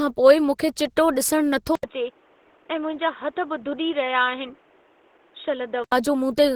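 Opus compression runs through the whole speech clip: the audio sounds hoarse, grainy and muffled, with extension up to 20.2 kHz, which fits a hybrid-mode encoder running near 16 kbps. An input switched to a poorer device, likely a change of microphone, appears from 1.75 s to 5.92 s. An 80 ms silence marks the switch, after which nothing passes above 3.8 kHz, the level drops somewhat and a faint new background noise sits under the sound.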